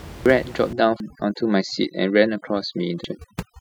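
At 0.26 s, compressed frames are skipped. The speech jumps ahead by about half a second, roughly five frames of about 93 ms each.

From 0.73 s to the end, overdone noise removal takes hold. The room noise, about 16 dB below the speech, drops and breaks up into twinkling specks. Quiet parts of the speech vanish with it.

At 1.0 s, another frame skip cuts out roughly 0.7 s, about seven frames. At 3.04 s, a third skip loses around 0.4 s.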